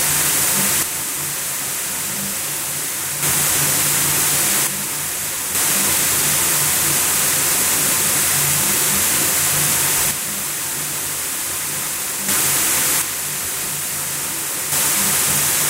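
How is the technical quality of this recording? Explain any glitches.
The recording has four abrupt level drops, each most likely caused by one channel dropping out. They occur from 0.83 to 3.23 s, 4.67 to 5.55 s, 10.11 to 12.29 s and 13.02 to 14.72 s. In each span the level falls suddenly by about 6 dB and recovers just as sharply at the end. The likely mechanism is a stereo channel going silent before the mono sum, which halves the shared content and removes anything carried only on that side, so the sound steps down in loudness.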